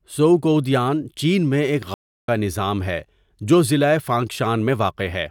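Speech that drops into about a third of a second of silence at 1.94 s, right after "ژؤکؤدیان چین میں ایک", then comes back at 2.28 s on "نظام ہے جو ضلع" with roughly 0.3 s skipped. This is a stream reconnect: the connection broke, the player restarted its decoder mid-stream, and playback resumed further along.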